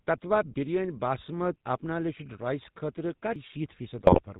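GSM full-rate codec damage runs throughout: everything above 4 kHz is gone, and coarse pulse-driven excitation gives the speech a buzzy, gravelly roughness that fits a 13 kbps GSM full-rate coder.

Audio missing between chunks at 3.36 s: the sound jumps abruptly where about a fifth of a second is absent, likely lost at a boundary between 2-second processing chunks.

GSM bit errors from 3.97 to 4.21 s: corrupted filter, pitch and gain values make the speech break into squawks, pops and gargling. This points to roughly 2% bit errors hitting about a dozen frames.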